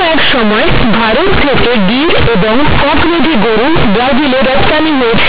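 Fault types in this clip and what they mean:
Companded audio read as linear: mu-law telephone bytes are played back as plain linear 8-bit samples without expansion, so every sign change swings the waveform across about half its range. The speech comes out very loud and buzzy, with heavy noise filling the pauses.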